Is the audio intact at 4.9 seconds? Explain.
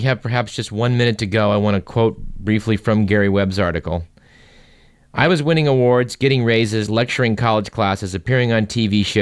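Yes, the speech at 4.9 seconds plays through cleanly, with no dropout, click, distortion or other fault at that moment.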